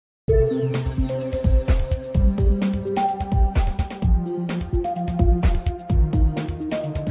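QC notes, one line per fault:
No faults were found. Nothing in the audio calls for a note.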